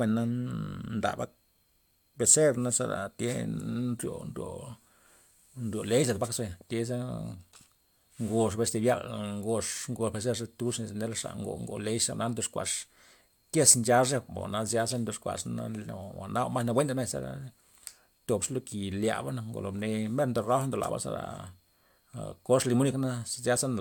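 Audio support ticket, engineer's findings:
No audible faults found in the speech recording. No working path is listed for separate comment.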